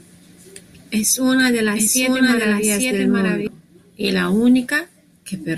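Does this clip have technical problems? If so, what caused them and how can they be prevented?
Yes. A doubled audio track runs from 1.39 to 3.47 s, ending just before "y la". A second copy of the speech trails about a second behind, at roughly equal level, starting and stopping abruptly. A duplicate capture path is the likely cause. Monitor only one input and check edits for overlapping copies.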